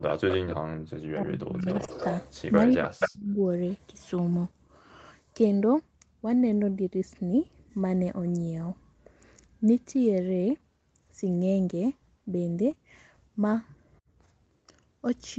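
Echo leak appears first, from 0.07 to 0.34 s, then again at 0.51 to 0.56 s, 1.68 to 2.32 s and 2.71 to 3.1 s. A delayed copy of the speech trails the talker, about 290 ms behind in the first three and about 210 ms in the last. It sits roughly 10 to 15 dB below the speech, rising to about equal level at 2.71 s. The likely cause is a far-end loudspeaker whose echo canceller let part of the pickup through and sent it back.

Speech suppressed in double talk overlaps these, from 0.3 to 1.68 s and again from 2.74 to 3.39 s. The talker's speech dips sharply, by as much as about 40 dB, in patches adding up to roughly a second in the first stretch and under a second in the second. It sounds as if the voice is being gated out in pieces. This is likely an echo canceller that could not separate the talker from the returning echo while both sides overlapped, and so turned everything down.

Short concealed packet loss comes at 12.71 to 12.78 s, two back-to-back 20 ms gaps. 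The receiver bridged each by extending the preceding sound for about 13 to 15 ms before fading back into the real signal. The result is a brief smeared wobble that can blur a short consonant. The audio carries nothing above 8 kHz, as expected for this call path.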